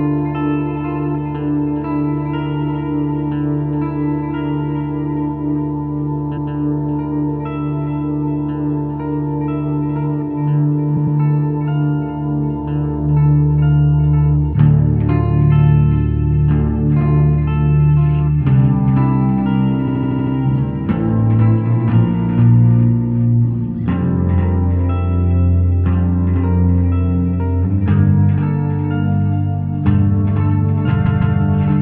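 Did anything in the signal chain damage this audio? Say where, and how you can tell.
Yes, there are repeated frames at the codec or storage stage. Short blocks replay as stutters at 6.36 s (157 ms, once), 10.96 s (105 ms, twice), 19.87 s (78 ms, six times) and 31.05 s (157 ms, twice). Block lengths that are multiples of about 26 ms point to duplicated compressed frames.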